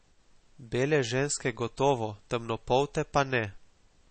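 From start to finish the speech carries plainly audible MP3 compression damage. Nothing is heard above about 8.4 kHz, so the top of the voice is cut flat. Weak frequency detail flickers in and out from frame to frame. That gives a watery, swirly texture with metallic chirps on sibilants. Consonant attacks smear. The likely cause is encoding at a very low bitrate, which fits about 32 kbps.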